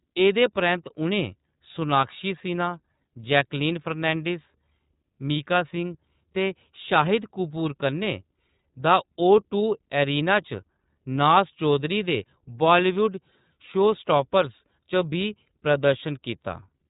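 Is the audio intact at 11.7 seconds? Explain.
No. At 11.7 seconds, as throughout the clip, the speech has passed through the iLBC codec, a narrowband VoIP coder that rebuilds each short frame's excitation on its own, without drawing on the previous frame. The sound points to its 30 ms frame mode at around 13.33 kbps. Nothing above 3.8 kHz survives, so the speech sounds muffled and boxed-in, and the frame-by-frame modelling leaves a plainly audible rough, synthetic edge on it.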